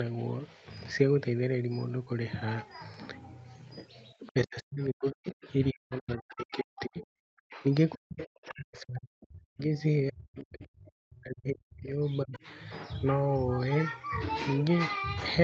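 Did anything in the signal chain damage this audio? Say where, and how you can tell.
Yes. Speech suppressed in double talk in the call processing: the talker drops by about 40 dB at 4.2–5.48, 5.71–7.65, 7.93–9.61 and 10.1–11.99 s, and by about 30 dB at 12.24–12.34 s, likely the echo canceller ducking everything during crosstalk.

The other side's voice is leaking through, also from the call processing: faint scraps about 25 to 30 dB down at 4.26–4.30 and 5.42–5.49 s, likely residual loudspeaker echo the canceller missed.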